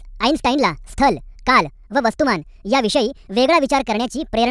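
A speech clip with a wrong sample rate fault from start to finish. The voice sounds high and rushed. Everything runs 1.5 times too fast, and pitch rises by about 7 semitones. Speed and pitch shift together by the same ratio. That happens when samples are played back faster than they were captured, with no rate conversion. The 1.5 ratio fits audio recorded at 16 kHz and played at 24 kHz.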